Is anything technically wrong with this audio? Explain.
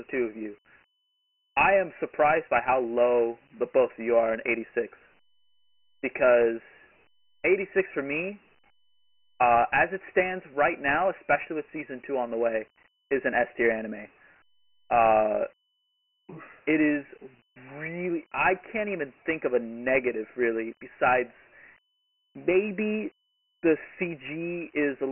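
Yes. Dialogic VOX ADPCM runs throughout: coarse 4-bit adaptive steps leave gritty hiss trailing the speech, with nothing above 3 kHz, which fits 6,000-sample, 24 kbps storage.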